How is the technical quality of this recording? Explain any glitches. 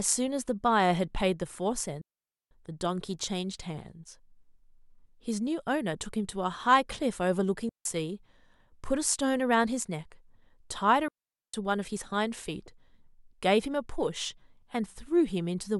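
The recording has three audible gaps, all digital wireless dropouts, at 2.01 to 2.51 s (0.50 s), 7.69 to 7.85 s (0.16 s) and 11.08 to 11.54 s (0.46 s). Each time the receiver lost too much data and muted with a very fast fade, leaving a clean hole of near silence. Unlike an analogue radio dropout, there is no hiss or noise burst around the hole.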